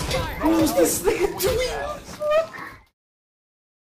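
No technical faults are audible.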